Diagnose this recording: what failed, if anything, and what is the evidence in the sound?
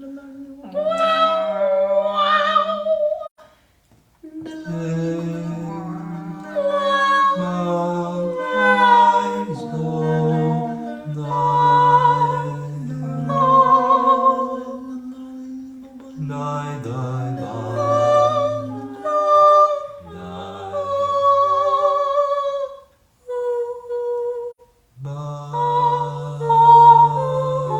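AAC frame loss with muting in the codec: gaps at 3.25–3.40 s and 24.51–24.60 s fade through overlapping windows.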